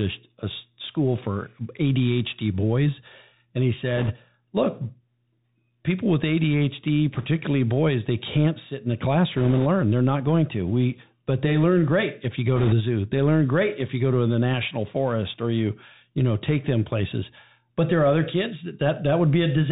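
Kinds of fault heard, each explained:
Bluetooth CVSD headset codec: The speech sounds narrow and muffled, with nothing above 4 kHz, scratchy s sounds, a granular hiss underneath and roughness on loud bright sounds. The codec sends one up-or-down bit per sample with an adapting step, which fits a 64 kbit/s headset link.
bit errors on a Bluetooth voice link: Short bursts of rushing, crackly noise without sharp clicks appear at 3.96, 7.15, 9.37 and 12.56 s, each lasting under 0.3 s. Flipped bits each push the step-by-step signal slightly astray, and at error rates of a few percent the damage stays soft and smeared.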